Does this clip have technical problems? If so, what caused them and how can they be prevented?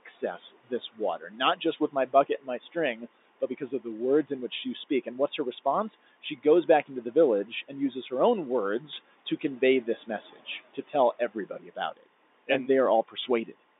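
Yes. Timecode bleed runs throughout as a steady chirping warble near 1 and 2 kHz, roughly 25 dB below the speech. The pattern fits 23.976-frame linear timecode leaking from a nearby track or cable. Prevent it by routing timecode away from audio lines and using shielded, balanced cabling.

Speech cut by the noise suppressor occurs at 0.06 to 3.08 s, 9.3 to 12.07 s and 13.08 to 13.55 s. Quiet parts sound swallowed, dropping by up to about 17, 19 and 13 dB. The suppressor mistook them for background. Prevent it by lowering suppression strength or lowering its threshold.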